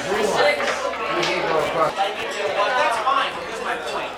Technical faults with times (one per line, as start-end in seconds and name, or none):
0.00-4.17 Wi-Fi interference